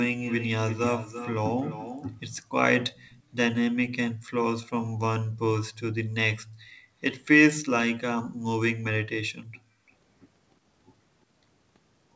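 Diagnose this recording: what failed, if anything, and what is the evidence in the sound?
An echo leak in the call processing: the far side's echo canceller likely let part of its loudspeaker pickup through. A copy of the speech trails itself by 342 ms at 0.19–1.33 s, 1.59–2.12 s and 2.95–3.23 s, at about −10, −15 and −30 dB.

Background gated by the echo canceller, also in call processing: while the loudspeaker played, the canceller clamped the microphone hard. The room sound drops by about 35–36 dB at 4.17–4.3 s, 6.44–6.93 s and 9.24–9.89 s, returning once the suppression releases.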